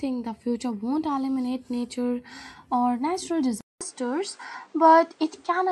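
After "eliminate nature or natural", at 3.61 s, the speech drops out for 200 ms and returns duller, with nothing above 9.3 kHz, faint new background noise and about the same level until the end. The likely cause is an input switched to a poorer device.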